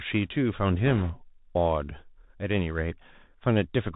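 The speech runs through a Bluetooth CVSD headset codec, its one-bit slope coding consistent with a 64 kbps link, cutting everything above 4 kHz and leaving scratchy s sounds over granular hiss. From 0.86 to 1.11 s, bit errors on the Bluetooth voice link, around one and a half percent, add a rushing, crackly noise without loud clicks.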